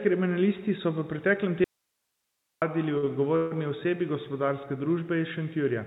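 At 1.64 s, just after "kriminalisti so v preteklem", the speech cuts out abruptly. This is an audio dropout to a faint residue. For about 0.98 s, until 2.62 s, only a faint hiss remains, far below the speech level. The line likely stayed live while the signal itself was lost.

From 2.98 to 3.05 s comes a short stall from a late packet. A packet arrived late and the jitter buffer ran dry. The last sound is held for 48 ms, with a slight buzz or dip. Nothing is lost. The speech resumes where it stopped.

At 3.36 s there is a call audio freeze, lasting until 3.53 s. The receiver likely ran out of packets and filled 147 ms by continuing the last sound as a fading buzz or hiss. It never falls fully silent. The speech then picks up from the same point, now delayed. Throughout, the narrowband call path leaves nothing above 4 kHz, which fits a 64 kbps G.711 link.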